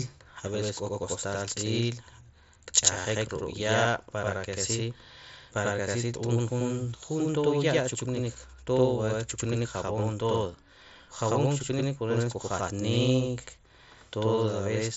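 From 0.48 s to the end of the speech, one channel runs 92.9 ms late, a lag that fits a 4096-sample buffer, and the two channels are then summed to mono. That channel delay is heard as doubling: each syllable arrives twice at equal level, with the second copy a distinct slap just behind the first. Through the mSBC headset path, nothing sounds above 7.7 kHz.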